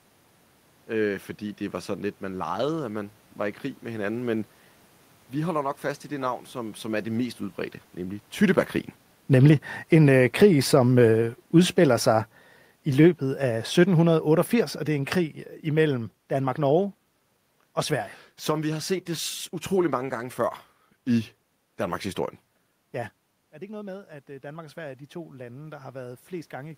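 From 8.4 s to 21.37 s, starting just after "det mest udbredte nemlig", the automatic gain is falling. Shortly after the talker shifts position around 8 s, the gain control judges the input too loud, or the room noise too strong for its starting gain, and lowers its gain by about 13 dB over roughly 13 seconds. The speech and the room background sink together as a slow, steady fade rather than a sudden step.

At about 22.5 s the talker moves again, and the input arriving at the microphone drops by about 15 dB. From 23.51 s to the end of the clip, the automatic gain is rising: the control treats the input as too quiet and raises its gain gradually. The speech and the room noise swell upward together over these last seconds. Because both rise at once, the change sounds like the whole recording creeping louder.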